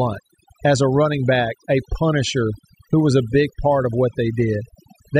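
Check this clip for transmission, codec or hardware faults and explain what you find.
The clip has one fault, present throughout: overdone noise removal. A noise reducer was set too hard. It cuts any frequency band close to its noise estimate, taking the quiet parts of the speech too. The background drops and breaks up into twinkling specks.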